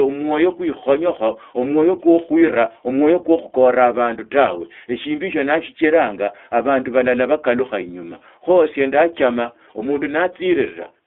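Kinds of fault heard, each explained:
iLBC codec: the speech went through a narrowband VoIP codec that codes each 20 ms frame independently, at a rate that fits 15.2 kbps, so everything below 300 Hz and above 3.5 kHz is gone and the speech sounds plainly rough and synthetic.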